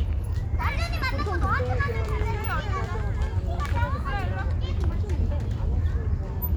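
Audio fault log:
No fault is logged for this audio.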